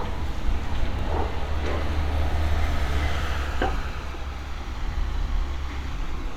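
A dropped buffer at 0.99 s: the sound jumps ahead by a few milliseconds, likely an overrun, with samples overwritten before being read and the edges joined.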